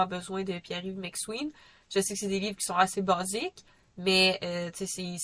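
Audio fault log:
No faults are present in this speech recording. There is nothing to log for any part of it.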